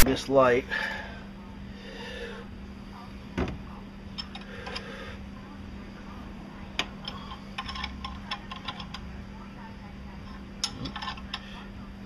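A block of text tags at the head of the file was decoded as if it were sample data, so the opening 0.00 to 0.02 s holds file tags played as audio. Because the bytes are text characters rather than a waveform, they produce a loud, harsh rasp offset to one side. It arrives as a brief burst of static with abrupt edges, cutting in at the very start and stopping just as suddenly.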